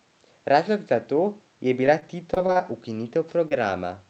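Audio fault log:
1.86 to 2.65 s: repeated packet loss (robotic sound). The sound turns choppy here. There are what sound like six short holes, the longest 27 ms. Each is patched by stretching the previous sound, so about 17% of this stretch is synthetic fill.
3.48 to 3.53 s: short concealed packet loss. About 20 ms of audio never arrived. The receiver covered it by continuing the last sound for 23 ms, then blended back. This leaves a brief smear in audio already limited to 8 kHz by the call codec.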